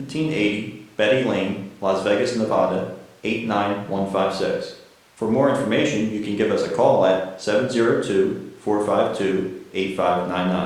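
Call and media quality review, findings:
Nothing stood out on listening to this speech recording.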